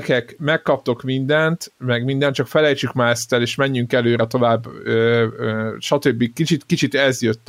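No technical faults occur at any point in the recording.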